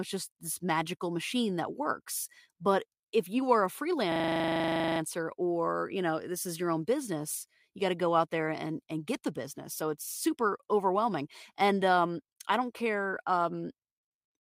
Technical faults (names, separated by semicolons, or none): system hang loop